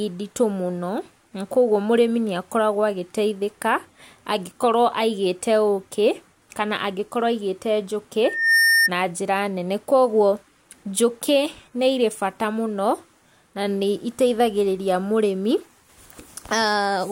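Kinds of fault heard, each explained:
Loudspeaker feedback squeal: the mic is hearing its own loudspeaker, and the loop runs away at one frequency. Here a 1.8 kHz tone swells over about a third of a second from 8.24 to 8.90 s, sitting a few dB above the speech, and dies just before "njĩra nene koguo njũkĩ".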